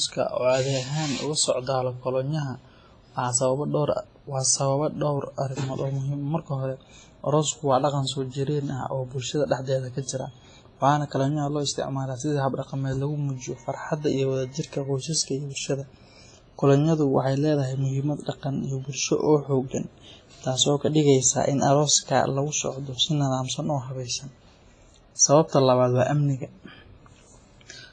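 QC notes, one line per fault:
Throughout, WMA compression: the speech sounds ringing and washy, with a hiss that swells and fades along with the voice, and nothing is heard above about 10.7 kHz. The likely cause is a WMA transform encoder working at a low bitrate, which fits roughly 24 kbps. Long transform blocks smear quantisation noise over tens of milliseconds around each sound, and weak spectral lines are zeroed, leaving the damage heavy.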